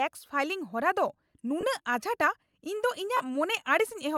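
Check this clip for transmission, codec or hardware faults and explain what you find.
Two brief dropouts affect the speech, both lost LE Audio frames. At 1.61–1.63 s and 3.17–3.20 s, the sound turns into a short noisy smear lasting about 20 ms and 30 ms. The LC3 decoder filled each gap by repeating the last spectrum with random signs, consistent with two and three lost 10 ms frames.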